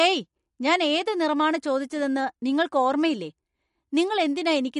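Throughout, the speech sounds watery and swirly, with nothing above 11.2 kHz, pointing likely to MP3 compression at a low bitrate near 49 kbps.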